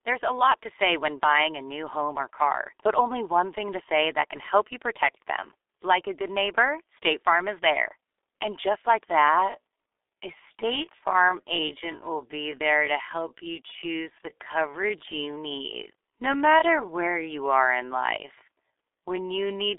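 Throughout the clip, the speech carries heavy G.723.1 codec damage. The band sits at roughly 300 Hz to 3.6 kHz, with nothing above 3.8 kHz. Its coarse 30 ms frames, consistent with about 6.3 kbit/s, leave voices muffled and hoarse with smeared consonants.

From 9.03 s to the end, starting just before "coverage options your", the pace abruptly drops to about 0.61 times normal speed while the pitch holds. This is likely a time-stretched section that padded the audio by repeating short fragments.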